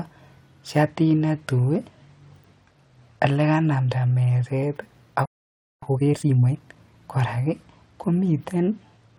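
From 0.88 s to 4.42 s the speech turns dull and gritty. This is a Bluetooth SBC bit pool drop. The link could not carry the normal rate, so the encoder spent fewer bits on each block. The top sub-bands got little or nothing, and the treble dulled. The remaining bands were quantised coarsely, which adds a rough, grainy noise. The change sounds like a bit pool falling from 28 to 12, near 96 kbps.

At 5.26 s the speech stops mid-flow. This is a playback stall. The output stays silent for about 0.57 s, until 5.83 s. The likely cause is a player that ran out of data or had its thread held up.

From 5.83 s to 6.95 s the speech runs fast. This is time-compressed catch-up. The player clears the backlog from the stall by dropping small slices and cross-fading the joins. The pace is about 1.5 times normal. The pitch stays where it was.

At 7.11 s the Bluetooth SBC bit pool drop returns and lasts to the end at 9.18 s. 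It sounds the same as before: the high end is dulled, and the same gritty noise sits over what remains. It again fits a bit pool cut from 28 to 12, around 96 kbps.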